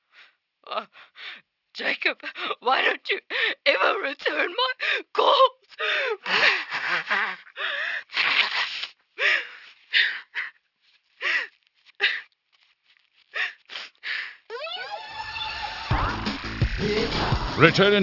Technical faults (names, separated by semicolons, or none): aliasing